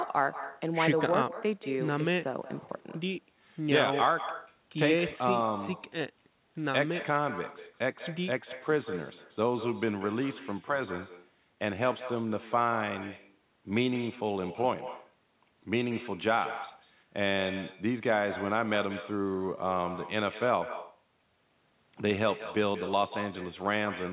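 Throughout, there is echo with no canceller. The far end's loudspeaker feeds its microphone, so every phrase returns about a fifth of a second later, about 12 dB quieter.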